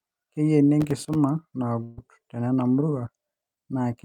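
From 0.81 to 1.15 s there's processor overload crackle. The processor kept missing deadlines on very short buffers, a few milliseconds each, and each miss dropped out to a tiny hard-edged silence. A dozen or more of those in a row make a gritty, tearing crackle across the speech.

At 1.83 to 1.99 s comes a burst of packet loss. About 140 ms of audio never arrived, and the receiver covered roughly 137 ms of it by stretching the last sound and letting it fade. So you hear a held buzz or hiss, then the speech jumps ahead with that stretch gone.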